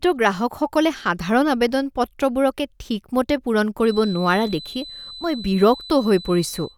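From 3.79 s to the end, a feedback whistle near 4 kHz sits about 20 dB below the speech, likely from a loudspeaker-to-microphone loop held just below runaway.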